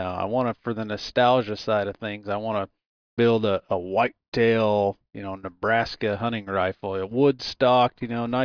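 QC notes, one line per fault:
No technical faults are audible in this speech recording.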